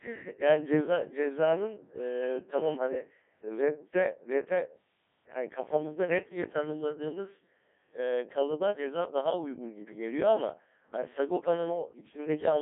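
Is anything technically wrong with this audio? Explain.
Yes. Throughout the whole clip the speech has passed through a Codec 2 vocoder. Only pitch, voicing, energy and a coarse spectral envelope survive, and the decoder rebuilds the voice from sine waves, so it sounds heavily robotic and buzzy, which fits a very low rate near 1.6 kbit/s. On a spectrogram, energy sits between about 250 Hz and 3.5 kHz with nothing above 3.6 kHz, and the harmonics look unnaturally regular. The waveform has lost its original fine shape.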